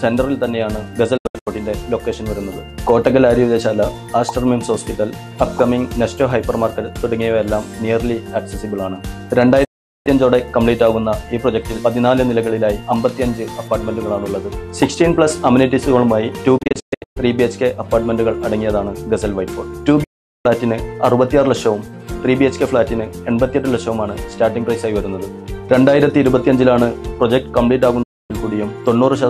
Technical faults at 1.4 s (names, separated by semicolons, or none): digital broadcast dropout